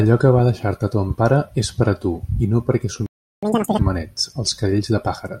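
At 3.06 s the speech cuts to silence for 0.36 s, until 3.43 s, then resumes from the point where it stopped rather than skipping ahead. This is a playback stall, likely the player running short of data or its thread being blocked, unlike a dropout, which loses material.

From 3.43 to 3.79 s comes catch-up at higher speed: the player races through its backlog at double speed, lifting pitch by roughly ten semitones, then snaps back to normal. Speed and pitch rise together, which separates it from a plain pitch shift.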